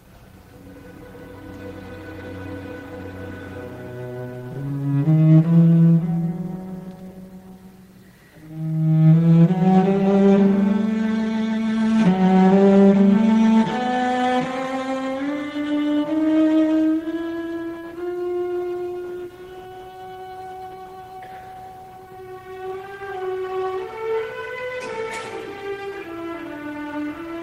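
Nothing stood out as a technical problem on listening to this audio.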